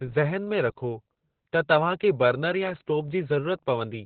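Throughout the clip, heavy Opus voice compression leaves nothing above 4.5 kHz, which fits the SILK coder in narrowband mode at around 8 kbps. The coarsely coded excitation makes the speech muffled, hoarse and slightly robotic.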